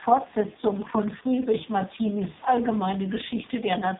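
A speech clip carried through the AMR narrowband mobile codec for its whole length. Nothing above about 3.8 kHz survives, and heavy codec damage makes the voice buzzy and synthetic, which fits the lowest 4.75 kbps mode. Faint room noise sits about 22 dB below the speech.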